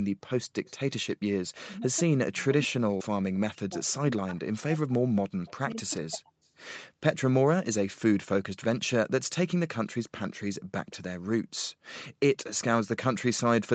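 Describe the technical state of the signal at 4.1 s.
At 4.1 s the speech sits inside a stretch of speech suppressed in double talk running from 1.67 to 6.32 s, likely because the echo canceller heard both ends at once and turned everything down. The voice dips in pieces, by about 40 dB at worst, over roughly three seconds in total. The waveform shows sudden envelope collapses, and the spectrogram shows the harmonics fading out in blocks.

The same moment also falls within an echo leak from 3.89 to 4.54 s. Speech picked up from a loudspeaker likely slipped past the canceller and comes back 185 ms late, faint at about 35 dB below the speech. On a spectrogram it appears as a weak, smeared copy of the harmonic pattern trailing the original, with nothing above 8 kHz, as expected from the call's microphone processing.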